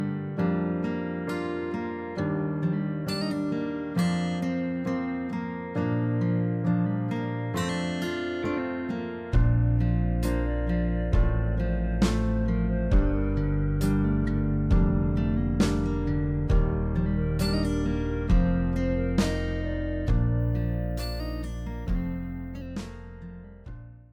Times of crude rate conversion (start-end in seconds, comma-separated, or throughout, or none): 20.40-22.66